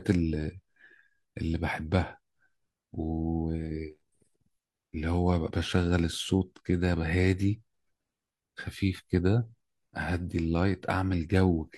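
No technical faults can be heard anywhere in the speech, so there are none to describe in time order.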